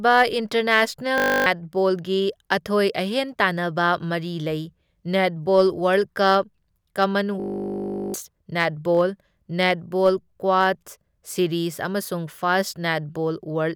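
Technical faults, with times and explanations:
1.18 to 1.46 s, system hang loop: the speech freezes into a steady 50 Hz buzz. The system stalled while the sound hardware kept replaying one 20 ms slice of its buffer, about 14 times over, and roughly a third of a second of audio is gone.
7.4 to 8.14 s, system hang loop: a 20 ms slice repeats about 37 times, giving a longer 50 Hz buzz just before "ꯅꯦꯠꯕꯣꯜ ꯅꯦꯠꯕꯣꯜ ꯀ꯭ꯋꯥꯗ ꯁꯤꯔꯤꯖ". Around 0.7 s of audio is lost.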